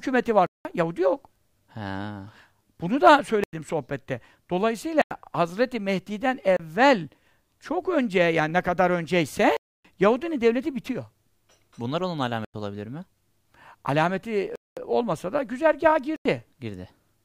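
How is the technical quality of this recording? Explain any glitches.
The speech is repeatedly interrupted by dropouts. Eight blocks of digital silence occur at 0.46–0.65 s, 3.44–3.53 s, 5.02–5.11 s, 6.57–6.60 s, 9.57–9.85 s, 12.45–12.54 s, 14.56–14.77 s and 16.16–16.25 s. They range from about 30 ms to 280 ms, and several last exactly 93 ms, which fits 4096-sample buffers left unfilled. Each one is an abrupt hole. On the waveform it appears as a flat line, and on the spectrogram as a blank vertical band.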